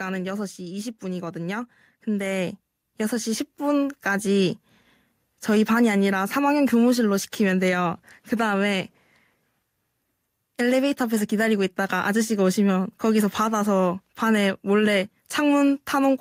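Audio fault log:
0.05–0.88 s, automatic gain falling: level starts loud then sinks by about 4 dB as the gain control backs off, taking the background down with the speech.
1.0–4.33 s, automatic gain rising: speech and background swell together by about 10 dB as the gain control slowly lifts its gain after judging the input too quiet.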